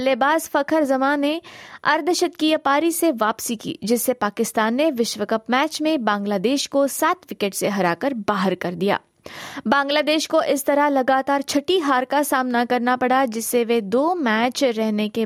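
A recording of speech, with no technical faults to report. Nothing in it calls for a time or a cause.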